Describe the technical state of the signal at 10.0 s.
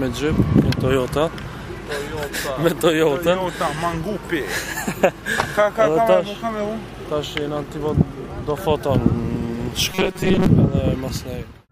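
Robotic sound from repeated short buffers runs from 9.92 to 10.46 s, covering the 10.0 s mark. New audio is likely arriving too seldom, so the playback fills the gaps by looping the last few milliseconds while the real signal is skipped, with most of the span made of repeats. The loop imposes a fixed buzz at about 188 Hz, which fits a repeated chunk of roughly 5.3 ms, turning the sound rigid and metallic.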